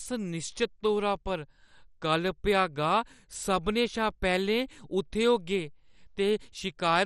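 Right from the start and all the way through, the speech has the dull, gurgly, grainy quality you get from heavy MP2 compression, likely from the encoder running short of bits. There's nothing above 13.8 kHz, and the bands that are left sound coarse and unsettled, flickering in and out as the allocation shifts. The damage is heavy enough to fit a low rate around 56 kbps, a lot like weak digital radio.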